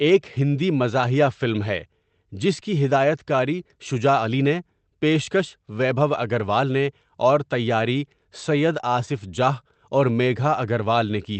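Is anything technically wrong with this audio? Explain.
No, nothing here is technically wrong: it's a speech clip that has come through a normal call path, so its top end stops at around 8 kHz, just as you'd expect from an Opus call link working as designed.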